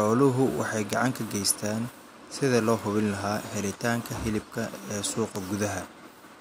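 Five bit error spikes tick at 0.93 s (before "gacan ka geystaan sidii"), 2.79 s (after "ka geystaan sidii loo"), 3.71, 4.64 and 5.36 s. Flipped bits make samples jump. The first is loudest, about -7 dBFS.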